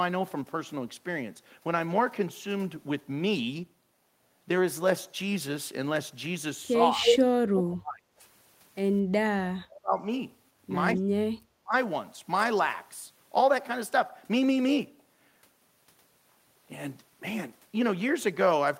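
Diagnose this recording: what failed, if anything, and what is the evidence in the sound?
The speech dips and partly drops out in four stretches: 6.96–7.21 s, 7.46–8.05 s, 9.23–10.03 s and 10.95–11.75 s. The first dip is shallow, about 10 dB. The later ones fall about 35 to 40 dB, nearly to silence. This points to the call-processing stage, likely speech suppressed in double talk. While both sides spoke, the echo canceller could not separate this talker from loudspeaker echo, so it turned everything down.

Between 7.05 and 7.17 s, a brief delayed copy of the speech appears about 239 ms behind the original, at about 5 dB above the speech. This is again a call-processing fault, likely an echo leak. A loudspeaker-side echo canceller left part of its microphone pickup in place and sent that scrap back.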